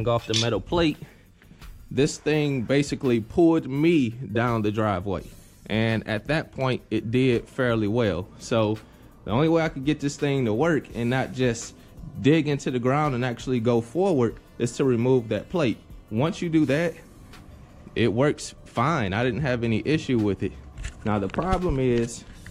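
No faults are audible anywhere in the recording.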